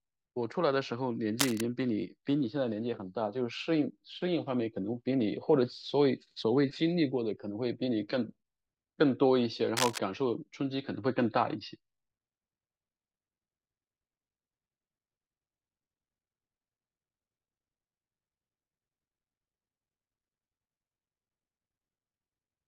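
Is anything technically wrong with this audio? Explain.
Yes. A cable scratch noise appears twice, from 1.39 to 1.62 s and from 9.77 to 9.99 s, likely from a worn connector or lead being moved so its contact resistance flickers. That adds dense, ragged bursts of scratching, only slightly quieter than the speech itself.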